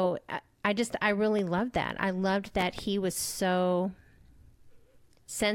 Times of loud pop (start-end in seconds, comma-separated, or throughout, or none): 1.39-1.61, 2.61-2.82